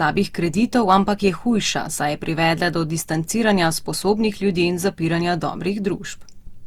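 Generation loss runs through the whole speech clip, likely from the audio being decoded and re-encoded with Opus around five times, in a way that fits a 64 kbit/s setting. Each pass requantised the signal on a shifted frame grid, so its errors stacked up. The result sounds swirly and hollow, with a smeared quality and softened attacks beyond what that bitrate alone would give, even though content still reaches up to about 20.1 kHz.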